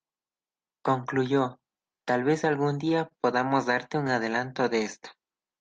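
Speech carried over a WebRTC call path, with high frequencies rolling off near 12 kHz as an Opus-type codec would produce. At 3.09 to 3.12 s one sound hangs on slightly too long with a faint buzzy smear: a short stall from a late packet. The jitter buffer ran dry, so the receiver stretched the last audio by 18 ms until the packet arrived, then resumed where it left off, losing nothing. Between 3.48 and 4.10 s come scattered short gaps, heard as about four brief ticks or hiccups. Separate packets arrived late or were lost across that stretch, and each small hole, none longer than about 15 ms, was patched by continuing the preceding sound, roughly 40 ms filled in total.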